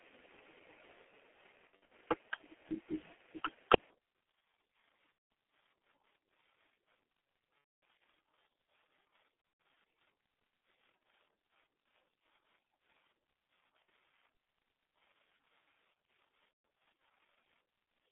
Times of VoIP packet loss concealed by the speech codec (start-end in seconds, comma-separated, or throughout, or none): 1.67-1.91, 5.12-5.30, 7.58-7.82, 9.41-9.65, 13.82-13.88, 16.52-16.64